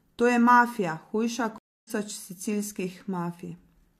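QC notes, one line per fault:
1.58–1.91 s, stream reconnect: the speech cuts to silence for 265 ms while the connection drops and the player restarts its decoder mid-stream. It comes back roughly a third of a second further along, so that bit of speech just gets skipped over.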